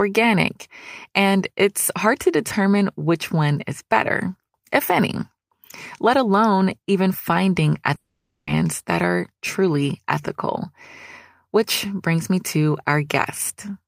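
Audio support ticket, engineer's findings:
Speech cuts out 7.95–8.49 s, about 0.52 s lost for good. Last sound stretched into a fading buzz, then about 0.19 s of near-silence before speech resumes further on. Likely a long network dropout, with the receiver papering over the gap.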